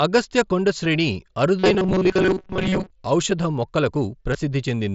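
Concealed Bluetooth headset packet loss first appears at 0.84 s, right after "అగస్త్య కొండ". About 7.5 ms of audio went missing between headset and phone, which fits a single lost packet. The receiver filled the gap by continuing the waveform with a closely matching recent stretch, so the patch is nearly hidden.

Robotic sound from repeated short buffers runs from 1.59 to 2.90 s. New audio arrived too rarely, and the playback side kept looping its last few milliseconds while most of the real audio was skipped. Each repeat is about 5.3 ms long, which sets a rigid buzz at 188 Hz. The sound turns metallic and mechanical but still roughly tracks its outline. The likely cause is a starved audio buffer.

Two more concealed packet losses fall at 2.54 s, inside the robotic stretch, and at 4.33 s. Each spans about 15 ms, which points to two consecutive lost packets. Because the lost stretch is longer, the continued waveform holds briefly as a buzzy tone at full level before the real signal resumes with a slight warble. 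This happens over the mSBC wideband link, whose light grain on louder passages is ordinary for that codec.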